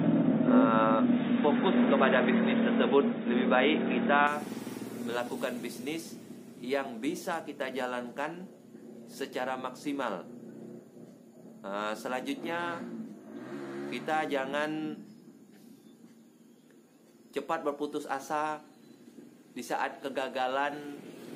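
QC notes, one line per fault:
0.00–4.27 s, input switched to a poorer device: the opening section is band-limited, with nothing above 3.8 kHz, giving a dull, boxy tone, a level shift of roughly 5 dB and a faint noise floor well below the signal that is absent afterwards. At 4.27 s full bandwidth returns abruptly with no gap. The likely cause is the recording starting on a narrower-band input, such as a headset call profile, before switching to the main microphone.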